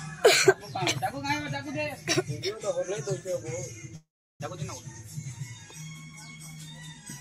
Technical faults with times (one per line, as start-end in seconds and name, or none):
3.95-4.42 call audio freeze